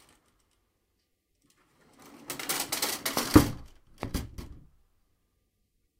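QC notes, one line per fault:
3.17–3.19 s and 4.03–4.05 s, loud pop: two single sharp pops, each about 15 dB above the surrounding sound, which continues underneath. The likely cause is a brief voltage step or pulse from a plug, switch, static or driver glitch. They show as narrow spikes on the waveform and thin broadband vertical stripes on a spectrogram.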